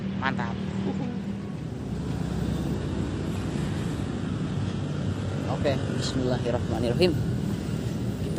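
Adaptive stream at a lower bitrate, 2.75 to 6.75 s: the connection slowed and playback switched abruptly, without a gap, to a leaner encoding, losing everything above 12.3 kHz.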